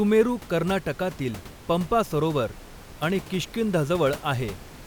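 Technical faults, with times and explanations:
No technical faults, with times and explanations, to report for this speech, as the room noise sits about 19 dB below it and belongs to the recording itself.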